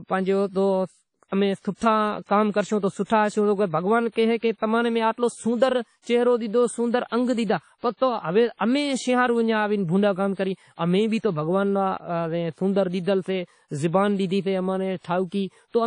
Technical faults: WMA compression; pre-echo

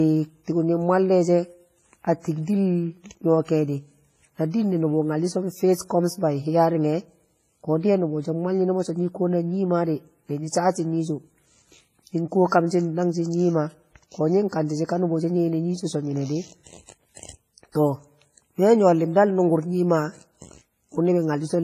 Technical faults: WMA compression; pre-echo

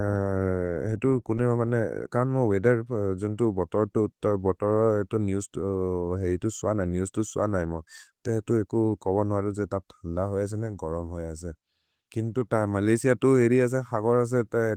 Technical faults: none

